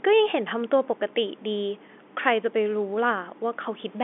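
No technical faults can be heard in this speech, which comes over an ordinary telephone line using G.711 coding, so the sound sits within a band of roughly 250 Hz to 3.5 kHz and any coding noise is faint at most.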